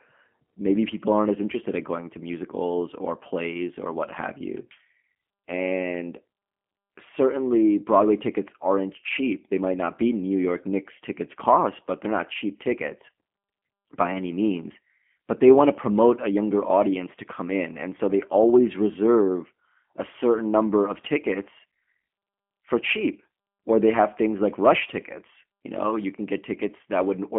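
Speech runs through the full clip with G.729 codec damage, plainly audible as a rough, slightly synthetic texture that fits an 8 kbit/s stream rebuilt from a vocal tract filter, pitch predictor and sparse pulses. A spectrogram shows energy roughly between 150 Hz and 3.4 kHz and nothing above 3.5 kHz.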